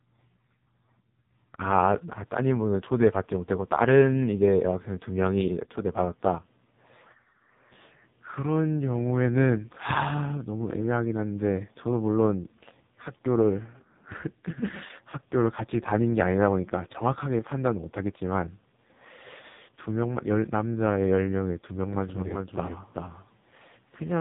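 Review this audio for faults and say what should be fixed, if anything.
The whole clip has gone through an AMR narrowband mobile codec. Nothing above 3.8 kHz survives, and the speech sounds heavily buzzy and synthetic, pointing to a very low bitrate around the 5 kbps mode, where the vocal-tract model gets too few pulses to work with. To prevent this, capture or route the call over a wideband path, or at least a higher AMR mode.

From 21.93 s to the end, there's a doubled audio track: a second full-band copy of the speech trails roughly 0.4 s behind at about 5 dB quieter. It has no room colour, and it starts abruptly. It's likely a second, slower capture path mixed in alongside the main one. To prevent this, make sure only one capture or monitoring path feeds the recording, and check the edit for overlapping copies.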